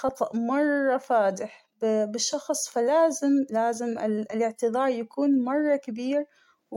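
A short stretch of speech, and nothing technically wrong turns up anywhere in it.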